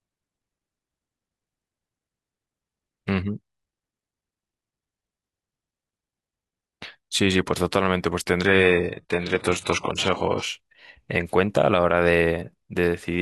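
At 8.46 s the adaptive stream switches abruptly to a lower bitrate for two seconds: treble drops, and the spectrogram goes empty above 11.5 kHz.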